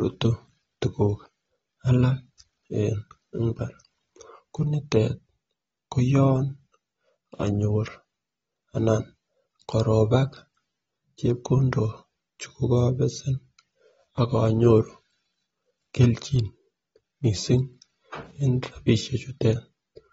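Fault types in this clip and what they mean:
AAC compression: the speech sounds dull and smeared throughout, with nothing above about 7.6 kHz and a plainly audible warbling, fizzy texture on sustained sounds and sibilants, likely from AAC-LC coding at a low rate such as 24 kbps, where quantising frequency lines leaves spectral holes.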